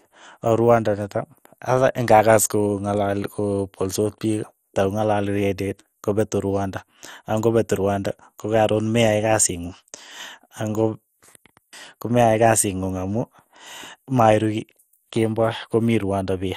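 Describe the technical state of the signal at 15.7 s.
At 15.7 s the speech sounds dull and plainly gurgling, with a granular, watery roughness and nothing above 16 kHz. The damage runs through the whole clip, not just this moment. The likely cause is MP2 compression at a low rate, consistent with about 64 kbps: too few bits are spread across the 32 sub-bands, so the upper bands drop out and flicker while the remaining ones are coarsely quantised.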